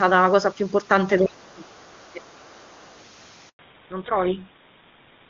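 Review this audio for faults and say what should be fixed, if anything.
Speech suppressed in double talk, 1.2 to 2.24 s: the talker's level sinks by roughly 30 dB for about a second. This is likely an echo canceller treating simultaneous talk as echo and turning everything down. A double-talk detector that protects near-end speech would prevent it.

Other side's voice leaking through, 2.05 to 3.04 s: a faint second voice, roughly 35 dB below the talker, is audible in the background. This is likely loudspeaker echo the canceller left in the microphone signal. Longer adaptive filtering or better acoustic isolation would prevent it.

Handover gap, 3.49 to 3.59 s: the sound drops out completely for 100 ms while the call switches networks and no speech frames arrive. Whatever was said in that window is gone. Make-before-break handover or frame-loss concealment would prevent it.

Fallback to narrowband, 3.59 s to the end: the call leaves AMR-WB at 23.85 kbit/s for GSM full rate at 13 kbit/s. 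Nothing above 4 kHz remains, so the speech turns dull and rough. Keeping both ends and the route on wideband-capable networks would prevent it.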